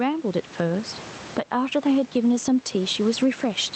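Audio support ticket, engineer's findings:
Gain pumping throughout: room noise, about 29 dB below speech; loud and soft parts closer in level, sound squashed, roughly 15 dB swing. Likely cause: mic gain far too high, fast limiter clamping.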